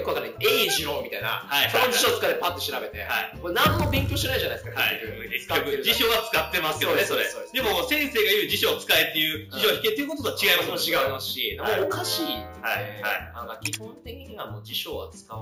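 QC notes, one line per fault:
Throughout: imaging from sample-and-hold upsampling. The sound fits a 16 kHz source repeated sample by sample up to 48 kHz without a smoothing filter, so a mirrored copy fills 8 to 16 kHz at about 13 dB down, heard as metallic fizz tracking level. A spectrogram shows content reflected about 8 kHz; the waveform looks stepped.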